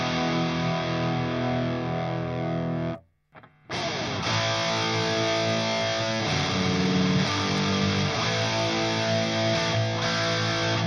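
At 7.58 s there is a single sharp click, likely dropped samples: a handful of values went missing, well under a millisecond, so the waveform jumps abruptly.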